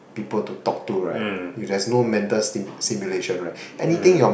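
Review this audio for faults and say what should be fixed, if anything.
No faults turn up in this audio, so nothing needs to be fixed.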